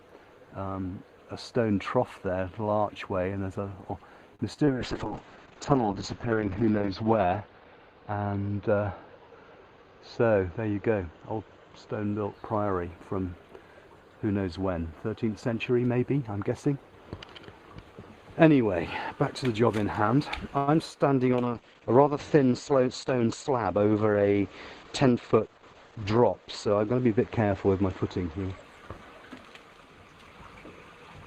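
At 4.35 s a short stall from a late packet holds the sound for 4.35 to 4.41 s, stretching it by 39 ms with a faint buzz or dip. Nothing is lost: once the packet arrives, playback resumes from the same point, now 39 ms later. That sets it apart from the concealed losses that follow, where audio really is missing.

Two short concealed packet losses come next, at 4.53 to 4.57 s and 4.65 to 4.69 s. Each time about 20 ms of audio never reached the decoder. The receiver bridged the hole with 17 ms and then 19 ms of extrapolated sound, heard as a brief smear or wobble. Unlike the stall, the timeline does not shift; the original content in those slots is simply replaced.

From 4.69 s a call bitrate drop sets in and lasts until 12.39 s. The encoder was told to spend far fewer bits, which fits a fall from around 32 kbps to about 7 kbps. The audio bandwidth narrows from 20 kHz to 8 kHz, so the sound turns muffled and watery. 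It is worst for about 2.2 s at the lowest rate. This is a sustained change in tone, not a momentary glitch.

Inside that stretch, from 9.63 to 9.85 s, a jitter buffer speed-up plays the audio at 116 % speed with the pitch unchanged. Short pitch-period slices, about 40 ms in total, were trimmed to drain excess buffered delay, so the passage sounds hurried rather than damaged.

At 20.57 s a call audio freeze holds the last sound as a fading buzz or hiss for 100 ms, to 20.69 s, with no full silence. Playback then continues from where it stopped, 100 ms late. The likely cause is packets held up in transit until the jitter buffer emptied. It is a longer version of the earlier stall, with nothing missing.

A second call bitrate drop runs from 21.32 to 28.69 s. This one fits a fall to about 10 kbps, again with an 8 kHz cut-off, and the muffled, rough sound persists for about 5.7 s at its lowest.

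Within it, 22.71 to 23.75 s brings a gentler jitter buffer speed-up at 109 %, removing about 100 ms. It sounds like a mild rush spread over a second, without the pitch rising.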